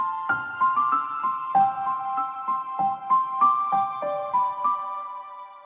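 At 2.34 s and 3.97 s, short concealed packet loss: about 20 ms, then 40 ms, of audio arrived too late and was synthesised from preceding sound, heard as brief smears.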